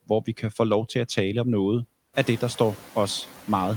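Noise suppressor artifacts run throughout the speech: background noise dips by about 7 dB between words and swells beneath them, appearing on a spectrogram as flickering, patchy low-level texture. Room noise rises around 2 s and stays about 20 dB below the speech.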